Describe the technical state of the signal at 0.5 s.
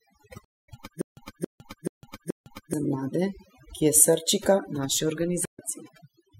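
A stream reconnect runs from 0.45 to 0.69 s. The connection dropped, leaving about 232 ms of silence, and a fresh decoder restarted mid-stream, so the audio resumes roughly a fifth of a second further on, with that stretch of speech skipped.

Overdone noise removal covers this moment as well. The reduction is set so hard that frequency bands near the noise estimate are pulled down or cut, taking quiet parts of the voice with them and leaving a lowered background that breaks up into twinkling, warbling specks.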